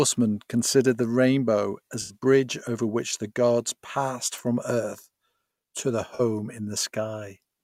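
At 2.01 s, after "considered the rainbow", and at 6.15 s, after "to their", AAC frame loss with concealment fills 85 ms and 43 ms gaps from the previous spectrum. Each sounds like a smeared, noisy blur and shows on a spectrogram as a structureless smudge.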